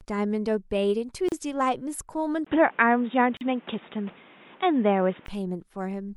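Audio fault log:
1.29 s and 3.37 s, gap at a join of encoded pieces: Continuous speech drops out for about 35 ms (1.29 to 1.32 s) and about 40 ms (3.37 to 3.41 s), then resumes exactly where it stopped. Pieces encoded separately were joined without trimming the silent start delay and the last-frame padding. The waveform falls to a flat line with slightly soft edges. The spectrogram shows a narrow blank vertical stripe across all frequencies, lightly smeared at each edge.
2.45 to 5.28 s, input switched to a poorer device: At 2.45 s the speech goes silent for about 20 ms, then comes back dull and boxy, with nothing above 3.8 kHz. A new background noise sits roughly 30 dB below the speech, and the level shifts by about 5 dB. Full bandwidth returns at 5.28 s. The likely cause is the recording input changing mid-take to a narrower-band microphone or a headset's call profile. The spectrogram shows a hard ceiling at 3.8 kHz and a raised noise floor, and the waveform shows a step in amplitude.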